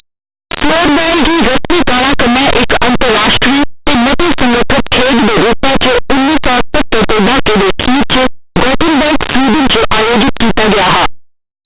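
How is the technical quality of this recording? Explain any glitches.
Poor: the speech comes with loud, harsh distortion from start to finish.

Linear audio read as companded, throughout: plain 8-bit samples are being expanded as mu-law codes, so values near zero can jump to near full scale, producing constant harsh, clipped-sounding distortion.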